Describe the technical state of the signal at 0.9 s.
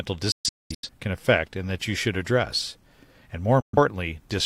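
At 0.9 s the speech has just returned from a digital broadcast dropout (0.32–0.89 s). The receiver muted failed frames with 3 ms fades, leaving silent holes totalling about 0.43 s (longest 0.21 s), seen as blank gaps in waveform and spectrogram.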